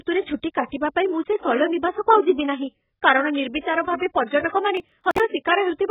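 The whole speech clip sounds dull and smeared, with nothing above 3.8 kHz and a warbly, fizzy edge on the sibilants. That heavy damage is likely AAC compression at a very low bitrate, something like 8 kbps, where the codec cuts the top band and starves what's left.

From 3.60 to 3.64 s there's pre-echo. A short hiss runs for about 36 ms ahead of an attack, because the codec spread its quantisation noise across the whole block, including the quiet stretch before the hit. The attack comes out blurred.

Between 4.77 and 5.20 s you get processor overload crackle, a gritty tearing over the speech. The processor kept missing its deadlines on small buffers of around 10 ms, a few dozen in a row, and each miss was simply skipped, leaving a hard-edged gap.

At 5.45 s there's one more, shorter pre-echo, about 10 ms of hiss smearing the front of another attack.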